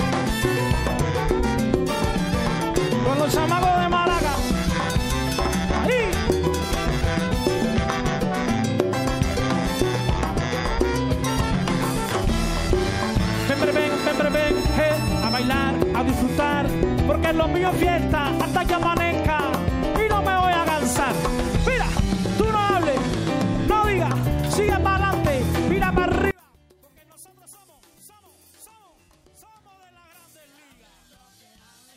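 From 26.31 s to the end, the level drops by about 32 dB and the sound nearly vanishes, background included, leaving only a remnant. This is likely one channel inverted: summed to mono, the shared content cancels. A dropout or mute would leave true silence instead.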